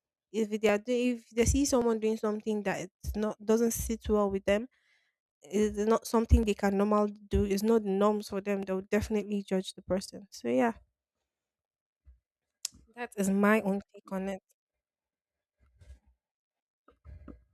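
Samples were likely dropped from the stream four times, each gap roughly 0.7 ms, so the waveform leaps straight to a later value. Too brief to remove any audible speech, each dropped-samples event lands as one sharp click: at 0.69 s, at 1.82 s between "if they see" and "doing something that it's", at 6.43 s just before "they can normally do", and at 8.63 s right after "the norms for them".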